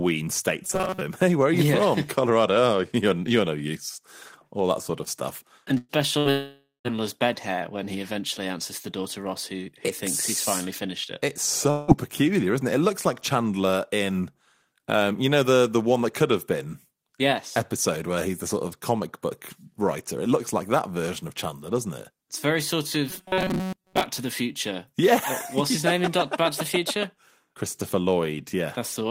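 From 0.65 to 1.01 s, the speech turns into robotic sound from repeated short buffers. New audio likely reached the player too seldom, so it kept replaying a tiny slice of roughly 5.3 ms and skipped most of the real signal. Looping at that rate forces a fixed 188 Hz buzz onto the speech, which comes out rigid and metallic while loosely following its shape.

At 5.77 to 5.92 s there is a burst of packet loss. About 120 ms of audio never arrived in time, and the receiver covered it by extending the last sound for about 115 ms, fading it rather than going silent, before jumping ahead past the lost part. A second burst follows at 6.19 to 6.28 s, where about 60 ms went missing and was papered over with a short held tail.

Almost immediately, from 6.31 to 6.87 s, comes a long network dropout, likely a stretch where no audio got through at all. About 540 ms is lost. The receiver stretches the last sound out as a decaying buzz or hiss, and the final 140 ms is silence before the speech resumes further on. 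A shorter dropout at 11.70 to 11.91 s removes about 180 ms, bridged by a fading fill with no silent gap.

From 23.10 to 24.06 s, the robotic 188 Hz buzz from repeated short buffers returns, lasting close to a second this time.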